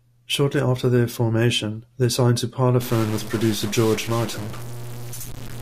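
At 2.81 s the speech suddenly turns harsh and buzzy, and it stays that way through to the end. This is most likely a stuck bit, one data line held at a fixed value so that roughly half the samples are shifted by the same amount, here a step of about -30 dBFS. Because that shift follows the waveform's sign around zero, even the quiet gaps fill with a gritty noise floor instead of going silent.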